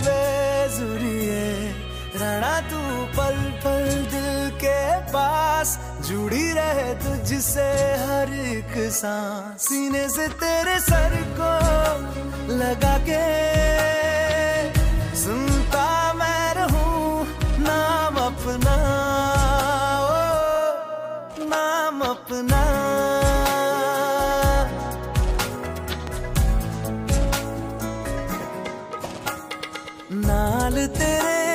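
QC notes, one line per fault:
26.07–26.10 s, loud pop: a single sharp pop jumps out here, peaking roughly 10 dB above the surrounding sound and gone in about 20 ms, while the audio underneath just keeps going untouched. That short, hard transient is what a sudden voltage step or spike sounds like once the downstream circuitry rounds it off. The likely culprit is a plug, switch, static discharge or driver glitch somewhere in the chain.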